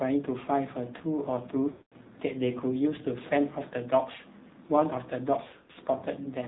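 Buzzy, synthetic-sounding speech runs through the whole recording, with nothing above 4 kHz. That is the AMR narrowband mobile codec at work. Its vocal-tract model and sparse pulses are clearly strained, which fits a low mode around 7.4 kbps. From 1.72 to 1.94 s the sound smears out and fades toward silence before returning weak. Between 5.48 and 5.78 s there is a cluster of short dips and warbles instead. Both are lost AMR speech frames. The decoder concealed them by repeating the last good settings at falling gain: in the first event a continuous 200 ms gap, and in the second about 160 ms of gaps scattered over 280 ms, none longer than 40 ms.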